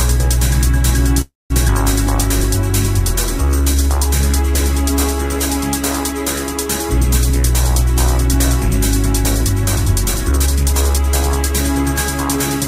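At 1.21 s the audio stops moving forward and the last sound is drawn out as a brief buzz that fades into silence. The final 0.2 s or so is fully silent, and normal playback resumes at 1.52 s. This is a call audio freeze, likely caused by packets stalling in transit until the jitter buffer ran dry. Nothing is lost. Instead, about 0.29 s of filler is inserted. On a spectrogram the last frame's spectrum smears horizontally and fades, then a blank band appears before the content picks up again.

At about 1.68 s comes a skip ahead. A chunk of roughly a tenth of a second was discarded, either in transit or when the buffer overflowed, with later audio already queued, so the sound jumps straight forward with almost no gap. The waveform shows two unrelated segments butted together, often with a small discontinuity. The spectrogram shows an abrupt vertical seam where the harmonic patterns change without transition.

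From 3.10 to 3.84 s a jitter buffer slow-down stretches the audio to 88% speed while the pitch stays the same. The buffer was building reserve by repeating individual pitch periods, adding 97 ms in all. The result sounds drawn out. The waveform shows runs of near-identical repeated cycles, and on the spectrogram the features are elongated in time while the harmonic spacing is unchanged.

From 9.24 to 11.28 s the opposite happens, a jitter buffer speed-up. The buffer held more than its target, so the receiver cut short slices of one or a few pitch periods over and over, removing about 0.3 s in total. The audio runs at 113% speed with the same pitch and sounds hurried. The spectrogram shows compressed, tightly packed events with unchanged harmonic spacing, and the waveform has slight splice points at each cut.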